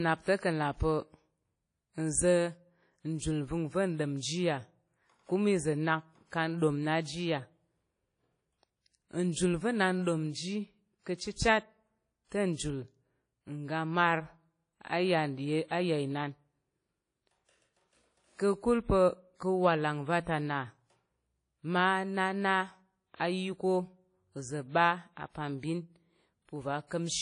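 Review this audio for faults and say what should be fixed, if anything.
The speech carries a washy, ringing quality throughout, with a hiss that rises and falls with the signal, and nothing is present above about 10.1 kHz. This is likely WMA compression: a transform codec at a low bitrate, consistent with roughly 32 kbps, discarding weak spectral lines and cutting the top band, with quantisation noise smeared across long blocks. To prevent it, keep an uncompressed or high-bitrate master and avoid low-rate WMA encoding.

Pre-echo appears as a brief hiss just before sharp onsets at 3.18 s (spread over 31 ms), 11.15 s right after "n ɗom ji ka̱" (50 ms), 12.54 s (43 ms) and 23.16 s (42 ms). Each attack lands late in a long transform block, so noise sized for the loud onset also fills the quiet gap before it, softening the attack. To prevent it, use a codec or encoder setting with block switching to short windows on transients, or a higher bitrate.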